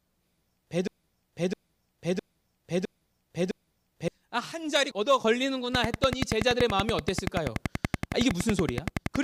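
From 0.88 to 4.08 s the speech gets stuck in a broken-record loop. The same 659 ms piece plays back to back five times, with nothing new coming through. Most likely the player or stream stalled and kept resending its last fragment, so that stretch of speech is lost.

Then from 5.75 to 9.17 s there's a train of clicks, a steady tick at about 10.6 per second, around forty in all, sitting well above the speech and audible in the gaps too. It's likely interference or a struggling interface injecting regular pulses.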